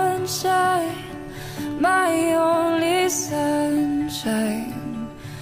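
No technical faults can be heard anywhere in the audio, and the signal holds steady throughout without any dropout, distortion or interruption.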